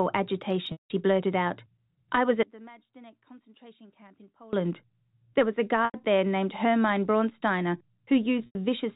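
Speech, carried over a telephone-band G.711 path with faint quantisation noise, suffers packet loss with pitch repetition three times. At 0.72 to 0.90 s, just before "blurted out I was", about 180 ms goes missing, which fits six lost 30 ms packets. The longer gap lets the repeated pitch period fade toward silence before speech cross-fades back. Two shorter 90 ms gaps, at 5.85 to 5.94 s between "was a" and "there named", and at 8.46 to 8.55 s, sound like a briefly held, buzzy tone. That looped-cycle buzz distinguishes concealment from a plain dropout, which would go abruptly silent. From 2.43 to 4.53 s, after "blurted out I was", the speech drops by about 25 dB and turns faint. The likely cause is one channel inverted, cancelling the centred voice when the stereo is summed to mono. Unlike a dropout, a faint residue persists for the whole two seconds instead of silence.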